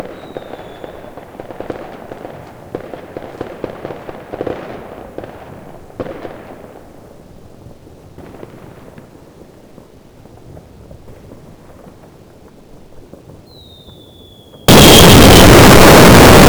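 A recording of sounds whose final stretch, from 14.68 s to the end at 16.49 s, likely had its 8-bit samples read with signed and unsigned mixed up, flipping the top bit so every zero crossing leaps across the full range. The result is loud, harsh distortion in which soft sounds come out as loud as strong ones.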